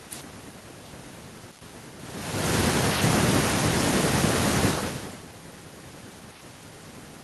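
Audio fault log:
No fault found.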